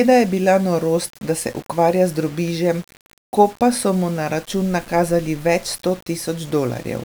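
Grainy, gritty distortion runs through the whole speech clip, rising and falling with the sound and breaking up the quietest parts; this is likely low bit depth without dither, with the signal rounded to about 7 bits and its error sitting roughly 25 dB below the signal.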